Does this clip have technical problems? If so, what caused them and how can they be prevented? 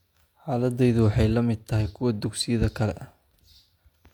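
No, nothing stood out as a technical problem on listening to this speech clip, so there is nothing here to prevent.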